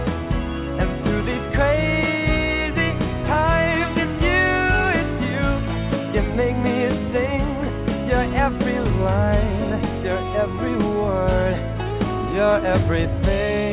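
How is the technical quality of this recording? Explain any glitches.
No glitches can be heard anywhere in the recording. There is nothing here that needs explaining.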